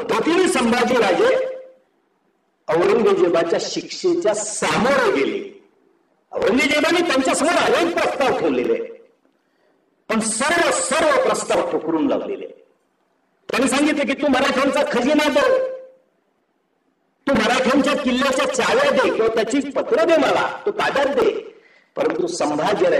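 A sharp double pop cuts across the audio from 6.42 to 6.53 s, and a single pop follows at 22.10 to 22.12 s, each around 10 dB louder than the sound beneath, which continues. These loud pops likely come from a sudden voltage step, such as a plug, switch or static discharge.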